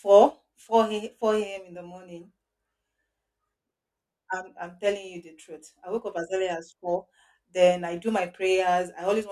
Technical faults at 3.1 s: none

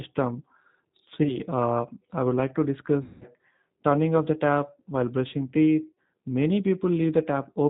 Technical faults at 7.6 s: G.729 codec

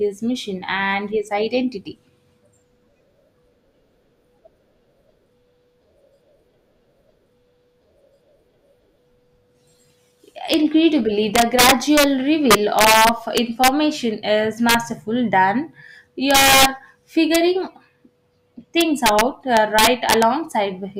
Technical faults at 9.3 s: none

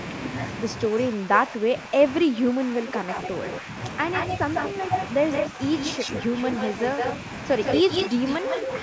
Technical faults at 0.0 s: none

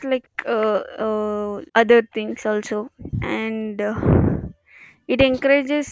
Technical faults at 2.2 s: echo leak

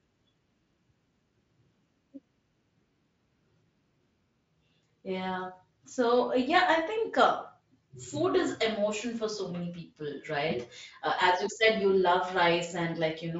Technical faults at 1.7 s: none

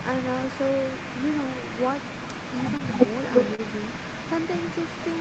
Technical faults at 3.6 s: echo leak; short concealed packet loss

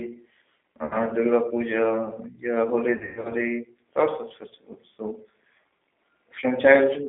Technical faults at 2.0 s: G.729 codec

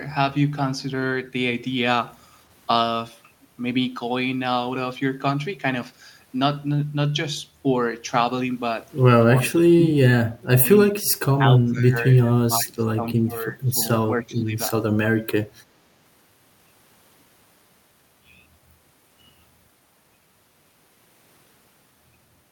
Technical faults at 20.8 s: none

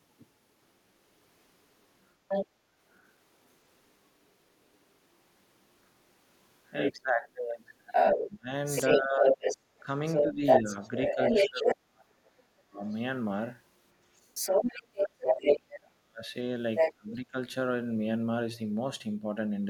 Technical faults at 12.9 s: speech suppressed in double talk; other side's voice leaking through

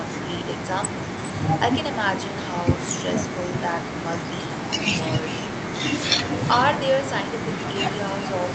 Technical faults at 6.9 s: echo with no canceller

